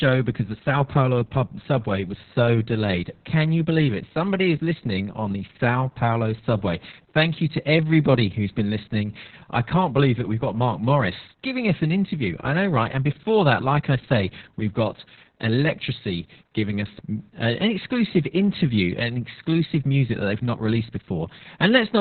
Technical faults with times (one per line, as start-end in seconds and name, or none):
0.00-22.00 Opus voice compression